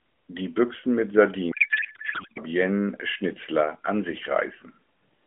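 From 1.52 to 2.38 s the speech turns into garbled, warbling noise. This is a codec payload misread: octet-aligned AMR frames are unpacked as bandwidth-efficient, so every field lands in the wrong place. The spectrogram shows smeared, formantless energy below 4 kHz, and the waveform envelope stops following syllables.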